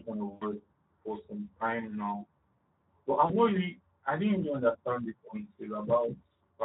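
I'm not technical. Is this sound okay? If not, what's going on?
No. Speex codec damage runs through the whole clip: this older internet-calling speech format squeezes the voice into very little data, so it can't carry the fine detail of each sound. The speech comes out noisy and hoarse.

VoIP packet loss concealed by the speech codec happens twice, from 0.34 to 0.44 s and from 3.25 to 3.34 s. Bits of the call, about 80 and 40 ms long, never arrived. The decoder filled each gap by stretching the last sound it had, giving a brief buzzy or smeared patch that fades.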